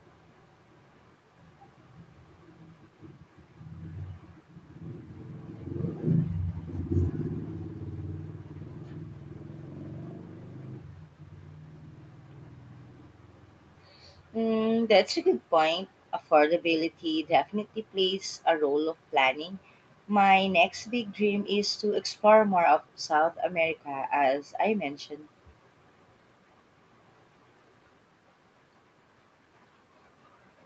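No technical faults are audible.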